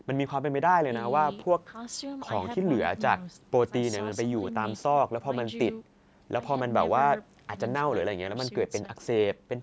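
There are no technical faults to describe in time order in this speech, which carries only the expected traits of call microphone processing, with the lowest bass trimmed and nothing above 8 kHz.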